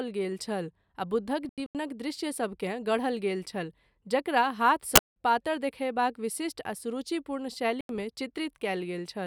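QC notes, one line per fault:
1.45–1.75 s: corrupt frame muted. The sound drops abruptly to silence for about 0.30 s, which points to roughly four damaged codec frames discarded by the decoder and replaced with silence. Timing stays intact afterwards.
4.95–5.14 s: corrupt frame muted. A hard-edged silent gap of about 0.18 s, consistent with around three rejected frames muted by the player. No time shift.
7.81–8.03 s: corrupt frame muted. An abrupt 0.22 s hole, fitting roughly three corrupted frames the decoder refused and the player filled with silence. Following audio keeps its timing.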